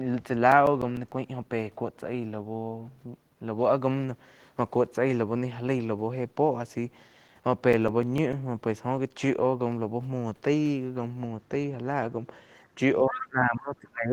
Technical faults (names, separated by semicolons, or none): CD scratch ticks; speech suppressed in double talk; other side's voice leaking through